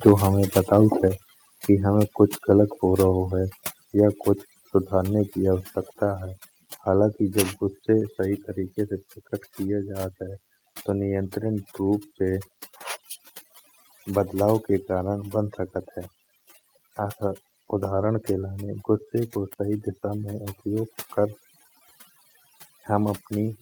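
Speech runs through a constant layer of overdone noise removal. The voice's quieter parts seem to dissolve, and the gaps fall to near silence with faint twinkling specks instead of a natural background. That happens because a noise reduction stage set far too aggressively is pushing individual frequency bands down or off whenever they sit close to its noise estimate, taking low-level speech detail along with the noise. Right at the start, between 0.06 and 0.12 s, the first loud peak turns harsh and crackly, with its tops squared off by about 4 dB and a noticeable share of samples flattened. This is microphone overload, with the input level likely set high enough that the peak ran into the converter's ceiling. Within that burst, at 0.09 s, the voice and background drop together by about 2 dB, and at 1.08 s they drop again by about 4 dB. These sudden steps are a microphone volume stepped down, consistent with the call software reacting to the loud, clipped input by cutting the device's gain in discrete jumps rather than smoothly. 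From 0.32 s to the end, a thin, steady buzz sits under everything, roughly 25 dB below the speech, with a fundamental at 100 Hz and a dense stack of harmonics above it. That is DECT cordless phone buzz: a nearby handset or base station transmits a short radio burst every 10 ms, and the audio circuitry rectifies those bursts into an audible 100 Hz pulse train.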